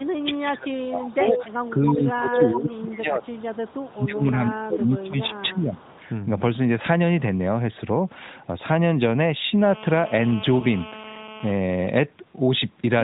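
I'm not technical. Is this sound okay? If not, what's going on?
No. The first six seconds have call-processing trouble, and there is one brief glitch later.

Speech suppressed in double talk: from 0.0 to 3.32 s and from 3.91 to 5.83 s, the speech dips sharply and comes and goes. This is likely the echo canceller turning the whole signal down because it mistook both sides talking for echo.

Echo leak: a fainter delayed copy of the speech, trailing it by about 0.29 s, is heard at 1.06 to 1.43 s, 2.53 to 2.76 s, 3.25 to 3.92 s and 5.77 to 5.92 s. The first two are fairly noticeable and the last two are barely there. This is likely loudspeaker sound reaching a microphone and being sent back.

Lost AMR speech frames: between 10.60 and 10.65 s, one 20 ms piece of the mobile signal was lost. The phone covered the gap by stretching the previous sound, which gives a very short dip or wobble. The narrowband mobile codec itself leaves only mild dulling.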